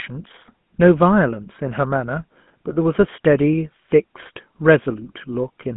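GSM full-rate codec coding runs through the whole clip. This early mobile codec models the vocal tract as a filter and excites it with a regular train of pulses, keeping only every third excitation sample, which fits a 13 kbps full-rate stream. That coarse excitation gives the speech a plainly audible buzzy, gravelly roughness. The line band sits at roughly 150 Hz to 3.5 kHz, and nothing above 3.8 kHz survives, so the speech sounds narrow and muffled.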